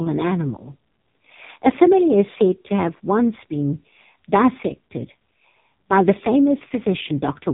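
From start to finish the speech carries AMR narrowband mobile codec damage, and it is heavy. Nothing above about 3.8 kHz survives, and the voice turns buzzy and synthetic, which fits one of the lowest AMR-NB modes, around 5 kbps. A simple low-pass filter would only dull the top end. Here the codec rebuilds the voice from a vocal-tract model and sparse pulses, so the timbre itself sounds artificial.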